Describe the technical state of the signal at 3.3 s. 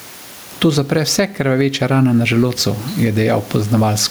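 Gain pumping at 3.3 s, as throughout: the gain swings around 15 dB with loud sounds, squashing loud and soft parts closer in level, likely a fast limiter fighting excessive microphone gain.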